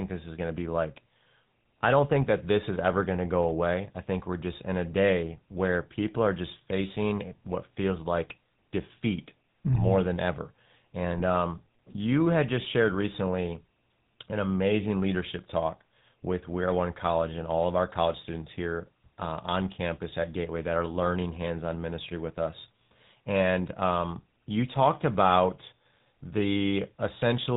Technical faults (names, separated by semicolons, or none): GSM full-rate codec; GSM bit errors